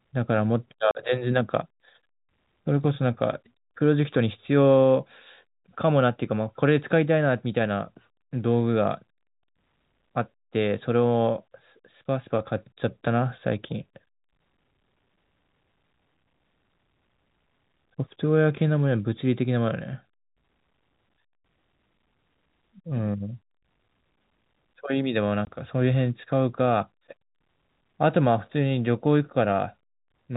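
At 0.91 to 0.95 s and again at 25.45 to 25.47 s the speech drops out into clean silence, a classic packet loss filled with silence. The gaps last 40 ms and 20 ms, which fits whole 10 ms packets going missing, and their edges are hard. The narrow telephone band of the G.711 coding stays audible throughout.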